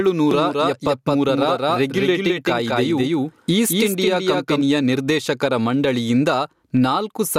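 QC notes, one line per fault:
Throughout: gain pumping. The gain swings by around 10 dB. Loud and quiet passages sit close in level and sound squashed. Likely cause: input gain set far too high, with a fast limiter pulling it down.
0.31 to 4.61 s: doubled audio track. A second full-band copy of the speech trails the original by roughly a fifth of a second, some 5 dB quieter. It has no room colour or decay and starts and stops abruptly. Likely cause: a slower second capture path or a misaligned edit.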